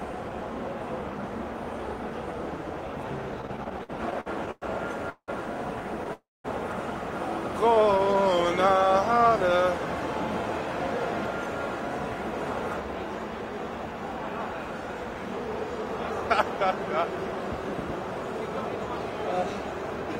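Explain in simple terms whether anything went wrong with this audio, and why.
From 3.41 to 6.11 s there's a stretch of repeated stalls (stutter). The sound hiccups 15 times, with the longest hold about 181 ms, as packets kept turning up late and the receiver stretched the last bit of sound to cover. About half a second gets padded in, with nothing actually lost.

Right after that, from 6.13 to 6.46 s, there's a call audio freeze. The last sound hangs on for a moment and then drops to silence for about 210 ms. The likely cause is packets held up in transit, so the receiver had nothing fresh to play. Everything picks up where it stopped, about 0.3 s later than it would have.

From 7.69 to 9.65 s you get a jitter buffer slow-down. The sound plays at 94% speed with the pitch unchanged, because the receiver was repeating tiny slices to rebuild its reserve. That adds 114 ms in total, so things drag a little.

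Then from 13.45 to 15.48 s there's a jitter buffer speed-up, running at 104% speed with pitch intact. The receiver had built up too much backlog and trimmed out about 70 ms in small pieces.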